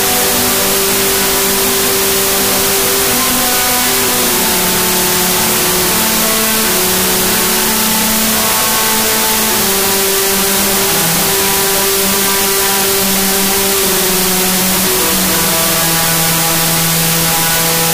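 Throughout, a wrong sample width buries the sound in loud noise, playing it at half speed and an octave low, which fits 32-bit float data read as 16-bit integers.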